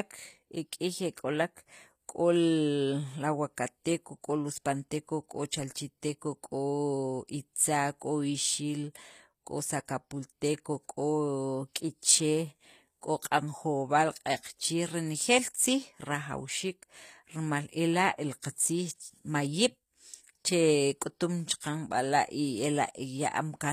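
From start to finish the speech carries plainly audible damage, likely from HE-AAC compression at a low bitrate around 24 kbps. The treble is rebuilt from copied lower bands rather than coded, so s sounds come out gritty and metallic, and nothing survives above 14.9 kHz.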